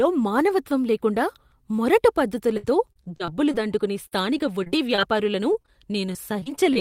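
Speech that turns choppy, with robotic, patched-over stretches at 2.57–3.55 s, 4.07–5.03 s, 5.53–5.72 s and 6.13–6.77 s. This is repeated packet loss: holes up to 63 ms long are filled by extending the previous sound, and the next hole follows soon after. From 5.84 to 6.38 s the speech also drags, running at about 93% speed while keeping the same pitch. This is a jitter buffer slow-down, which repeated small pieces of the signal to add 44 ms of reserve.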